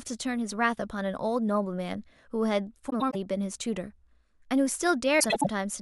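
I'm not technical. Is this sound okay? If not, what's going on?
No. Twice the audio had frames out of order: two neighbouring pieces of the speech, each about a tenth of a second, arrived swapped and played that way. From 2.89 to 3.15 s and from 5.20 to 5.47 s it flutters and garbles.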